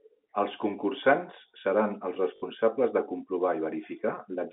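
Right after "concursants seran els", from 2.36 to 2.42 s, packet loss with last packet repeated replays one slice for 60 ms, which fits three lost 20 ms packets. It gives a robotic 50 Hz stutter. The waveform shows identical blocks repeating every 20 ms.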